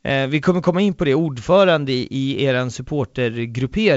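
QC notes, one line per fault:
The speech comes through G.722 wideband telephone coding at 64 kbit/s, with band-limited sound up to about 7 kHz and at most a faint trace of the coding in the upper band.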